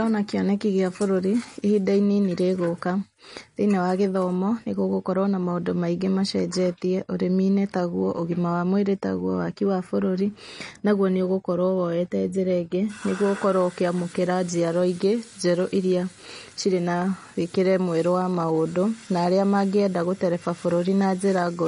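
Throughout, the speech carries plainly audible MP3 compression, likely from a low bitrate near 40 kbps: nothing above about 10.6 kHz, with watery, swirling artefacts as weak frequency lines drop in and out.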